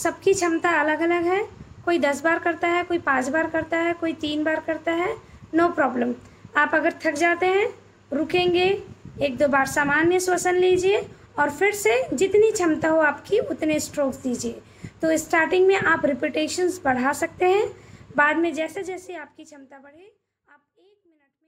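Nothing stood out on listening, and the level eases away smoothly over the last few seconds, ending around 21.5 s.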